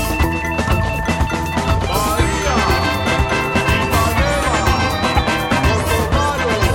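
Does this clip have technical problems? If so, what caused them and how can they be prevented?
Yes. A corrupt frame decoded at 5.17 to 5.19 s in the music: damaged bits in what sounds like a single compressed frame were decoded anyway, spraying energy into wrong frequencies as a loud chirp, squeak, blip or burst of noise peaking around -5 dBFS. Preventing it needs error detection with concealment or retransmission.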